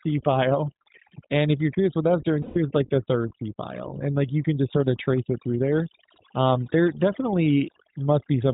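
Overdone noise removal runs through the whole speech clip. The reduction was set far too strong. Frequency bands near the estimated noise floor are pushed down or cut, taking quiet parts of the voice with them. The background drops and breaks up into twinkling specks.

The iLBC codec is also present throughout, and its damage is plainly audible. Nothing above 4 kHz survives. Each 20 ms frame is coded on its own. The speech sounds rough and slightly synthetic, which fits a rate of about 15 kbps.

Lost iLBC frames appear from 2.42 to 2.58 s, a gap of 140 ms. The decoder fills it by repeating the last pitch cycle mixed with noise. This sounds like a held, buzzy vowel. Because iLBC frames stand alone, the voice recovers almost immediately afterward.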